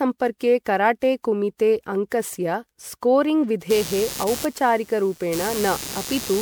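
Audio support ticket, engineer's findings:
Speech smeared and hollow throughout, swirly artefacts, blunted consonant attacks, nothing above 20.8 kHz. Likely generation loss: repeated MP3 re-encodes, around 128 kbit/s, maybe seven passes, each requantising on a shifted frame grid so noise and spectral holes stack up.

Computer activity noise from 3.70 s to the end at 6.41 s. Buzzy chirping pulses around 150 Hz, roughly 15 dB under the speech, tracking machine load rather than the talker. Processor or graphics load is disturbing the shared audio ground.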